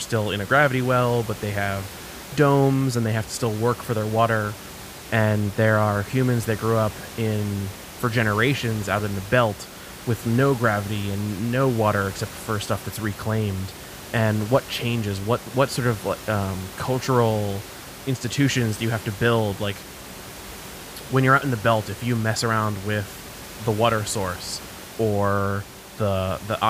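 No technical faults are audible.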